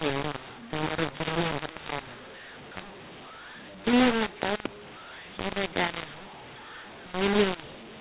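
mu-law and A-law mixed up, throughout this speech clip: telephone audio written as G.711 A-law is being read back as mu-law, so sample levels are scrambled, the speech turns harsh and distorted, and the quietest samples rise into a noise floor that fills the pauses, all within the 4 kHz telephone band.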